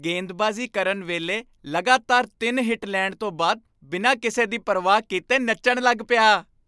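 Nothing in this recording trips any alarms, since there's no fault to point to anywhere along its run.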